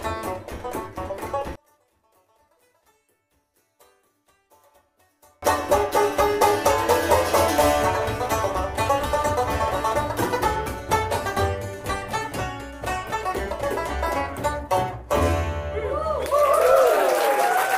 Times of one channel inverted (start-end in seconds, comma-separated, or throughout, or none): 1.55-5.42